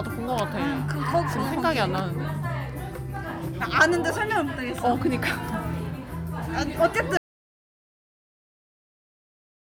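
Sounds play until 7.17 s, when the audio cuts off abruptly and falls to silence, with no room tone, for the remaining 2.5 s to the end. This audio dropout to silence was likely caused by lost input, such as a disconnected device or stray mute, while recording continued writing silence.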